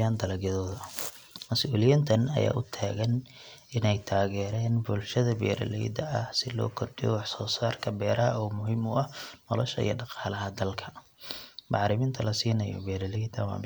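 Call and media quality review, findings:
No findings in this call and media quality review.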